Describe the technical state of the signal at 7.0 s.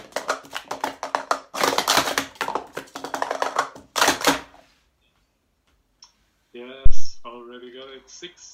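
At 7.0 s the signal is inside a phantom power thump, which runs from about 6.86 s to 7.14 s. A supply was switched on or off on the live input. That sudden voltage step passed through the coupling capacitors into the audio path. It sounds like a deep, low thump. It hits about 0 dBFS, so the input is driven to full scale. The thump then dies away quickly, fading over roughly 62 ms.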